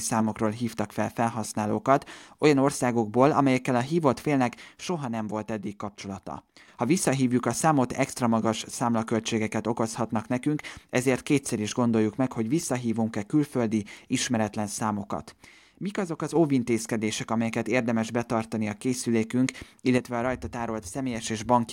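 At 4.80 to 6.68 s, again at 15.45 to 16.36 s right after "külföldi ismeretlen számokat", and at 19.98 to 21.24 s after "érdemes betartani a készülékünk", the speech abruptly sinks by about 6 dB, then jumps back. That's likely one channel dropping out before the mono sum.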